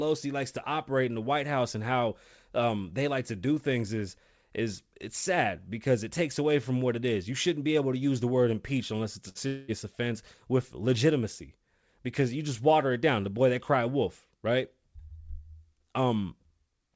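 At 9.29 s there's a short burst of packet loss running to about 9.38 s. Roughly 60 ms of speech never arrived, so the receiver stretched the last sound and turned it down before the speech picks up again a little further on.

Just after, from 9.47 s to 9.71 s, comes what's likely a long network dropout. About 210 ms went missing, and the concealment carried the whole stretch as a fading buzz-hiss without ever reaching true silence, then the speech jumps ahead past the lost part.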